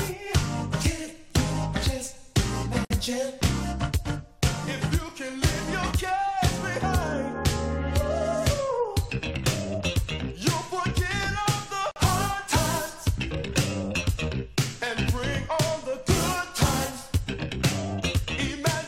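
Separately encoded pieces were joined without trimming each encoder's start delay and last-frame padding, leaving a gap at the join of encoded pieces: a gap opens in the sound for about 56 ms at 2.85 s and 47 ms at 11.91 s, with smeared edges, then the sound resumes where it stopped.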